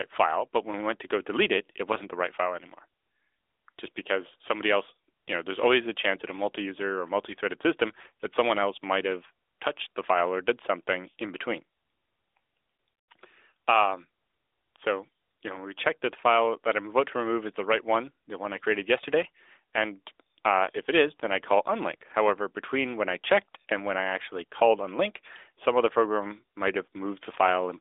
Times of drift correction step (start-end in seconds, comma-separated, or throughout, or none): none